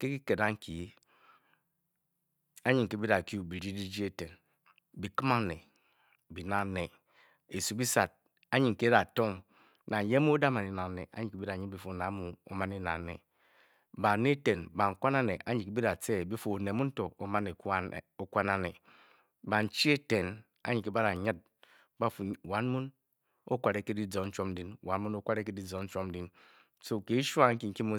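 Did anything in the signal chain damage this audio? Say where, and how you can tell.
Yes. From 0.59 s to 27.59 s the speech carries a click every 0.6 s, about fifty in all. This is likely clock drift buffer slips at the driver or buffer stage: two unsynchronised clocks, a few hundred ppm apart, force a handful of samples to be dropped or repeated at each slip.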